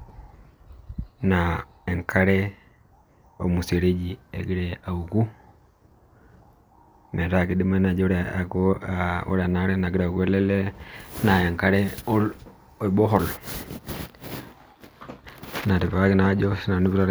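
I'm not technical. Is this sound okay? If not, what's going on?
Yes, this sound is okay; nothing is going wrong in it.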